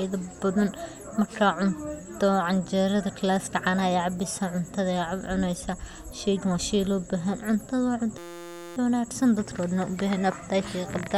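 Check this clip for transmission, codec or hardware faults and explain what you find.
One fault: a system hang loop from 8.18 to 8.77 s. A roughly 5.8 ms slice of the speech, which fits a 256-sample buffer, repeats exactly while the output keeps cycling the frozen buffer, giving a steady 172 Hz buzz. Unlike a dropout, nothing falls silent.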